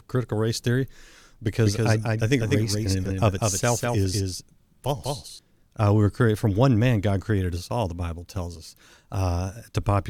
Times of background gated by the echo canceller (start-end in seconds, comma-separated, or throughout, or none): none